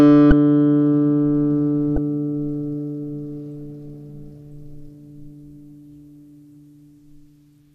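Two short glitches break into the music, one from 0.29 to 0.32 s and another from 1.95 to 1.98 s, each lasting about 30 ms. Both come from damaged data in a compressed stream. Part of the encoded file was corrupted at those points, so the decoder misread the affected frames and lost its place. It then had to hunt for the next valid frame header before clean playback could resume.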